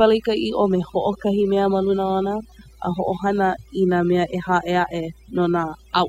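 Overdone noise removal runs through the whole clip, from the first moment to the last. A noise reduction stage set far too aggressively pulls individual frequency bands down hard, or shuts them off entirely, whenever their level sits close to what it takes to be noise. Softer parts of the speech fall under that threshold and vanish along with the noise, so the gaps sink into near silence dotted with twinkling specks.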